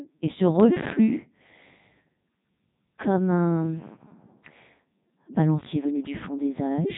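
Throughout, the speech passes through a Codec 2 vocoder, which fits its top 3.2 kbit/s mode. The voice is rebuilt from sine waves and sounds robotic and buzzy, with nothing above 3.8 kHz, unlike waveform-codec smearing.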